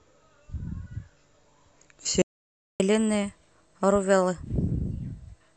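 At 2.22 s the speech cuts out mid-flow and silence holds for about 580 ms, until 2.80 s, when it picks up again. This is a playback stall: the output simply had nothing to send for that stretch, most likely because the player's buffer ran dry or its playback thread was held up, so the audio froze in place rather than fading or glitching.

From 2.80 s to the end, the speech sounds hurried and slightly raised in pitch, running at 1.1 times normal speed and sitting roughly a semitone and a half high. This is catch-up at higher speed: having fallen behind during the stall, the player resamples its backlog faster to regain the lost time, and because resampling shifts speed and pitch together, the voice comes out both quicker and brighter.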